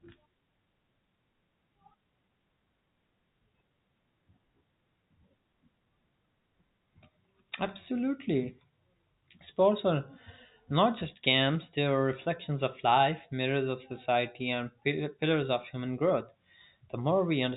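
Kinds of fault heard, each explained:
Nothing stood out on listening to this speech.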